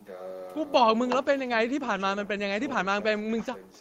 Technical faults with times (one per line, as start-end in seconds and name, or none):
none